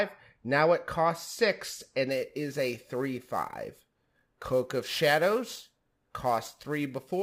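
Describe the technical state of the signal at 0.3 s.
At 0.3 s the speech signal is intact, with no dropout, clipping, distortion or other audible fault at that point.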